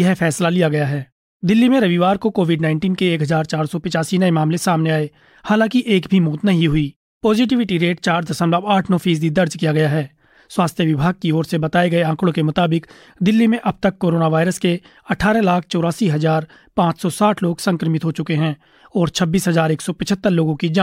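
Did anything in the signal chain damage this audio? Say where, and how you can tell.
No, nothing anywhere in the chain audibly damaged this speech recording.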